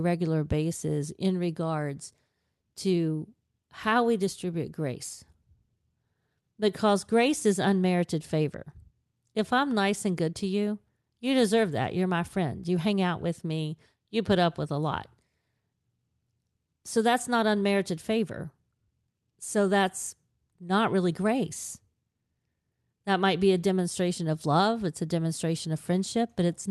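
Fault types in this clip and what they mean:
There are no fault types in this clip, so there is nothing to explain.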